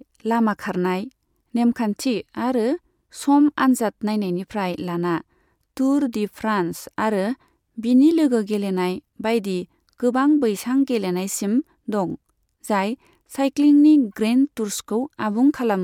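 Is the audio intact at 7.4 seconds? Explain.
Yes, the speech at 7.4 seconds is intact, with no audible fault at that moment.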